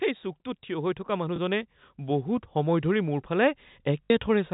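From 0.67 to 3.34 s the speech and background swell together by about 8 dB, as automatic gain rising lifts a level it judged too quiet. At 1.36 to 1.38 s a small blip appears, then a longer 60 ms robotic buzz from 4.05 to 4.10 s. This is packet loss with the last packet repeated, replaying old audio out of step with the pitch, which fits one and then three lost 20 ms packets. The band-limited G.711 telephone sound is audible throughout.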